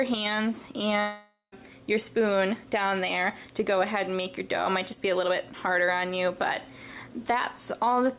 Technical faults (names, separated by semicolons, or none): long network dropout